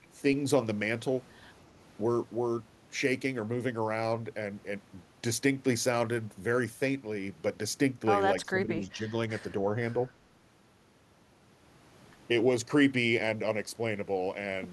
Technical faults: speech suppressed in double talk

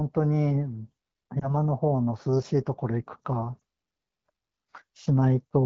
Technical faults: lost AMR speech frames

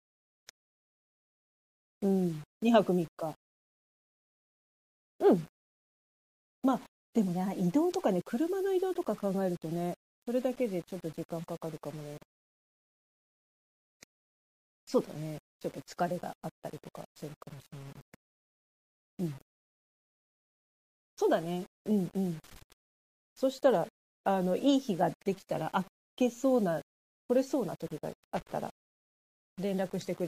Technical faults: low bit depth without dither; pre-echo; loose connector crackle

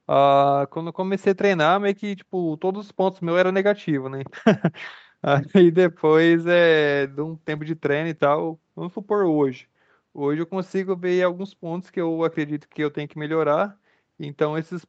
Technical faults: none

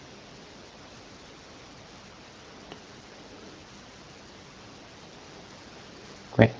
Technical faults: none

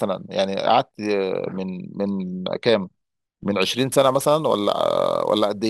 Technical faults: sample clock jitter

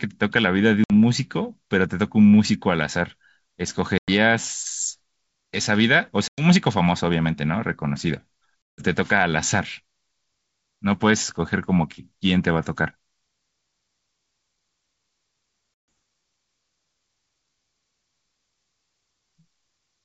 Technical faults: packet loss on an ADPCM call

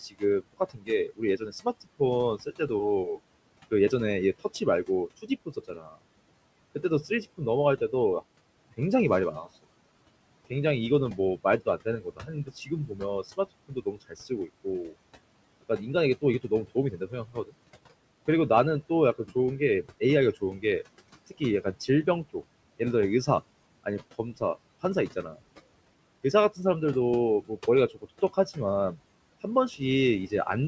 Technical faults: noise suppressor artifacts; speech cut by the noise suppressor

